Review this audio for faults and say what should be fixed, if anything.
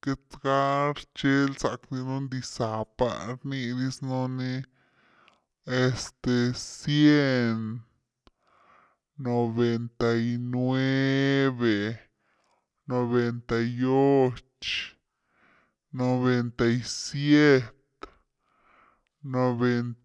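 The whole recording plays back at a wrong sample rate, so the speech runs slow at 0.689 of its proper speed and sits about 6.5 semitones low. Both effects come from one cause: samples are being clocked out more slowly than they were captured, which fits material recorded at 32 kHz but played at 22 kHz without conversion. What separates this from a pitch-shift or time-stretch fault is that tempo and pitch fall together by the same ratio, with no smearing or warbling. To prevent it, tag the file with its true rate and resample explicitly whenever the playback rate differs.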